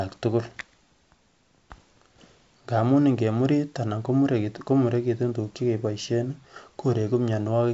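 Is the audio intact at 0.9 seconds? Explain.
Yes, the audio is intact at 0.9 seconds, with no fault at that moment.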